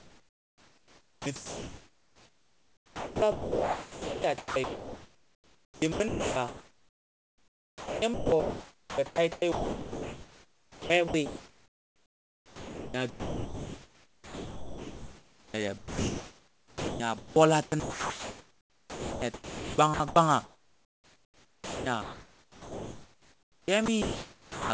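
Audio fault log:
0.00–17.36 s, 17.66–20.16 s and 20.44–24.70 s, sound chopped by the voice detector: the sender's voice detector likely kept gating transmission, so about 15.2 s, 2.06 s and 3.78 s of these spans were filled with comfort noise. Quiet edges drop out.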